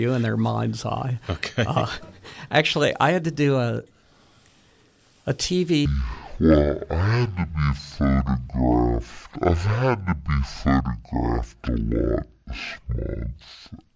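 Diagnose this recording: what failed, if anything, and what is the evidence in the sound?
From 5.86 s to the end, the sound abruptly drops a full octave and runs at half speed, with pitch and tempo sinking together. That is a wrong sample rate at the playback stage: samples clocked out at half their recorded rate with no conversion, consistent with 32 kHz material played at 16 kHz.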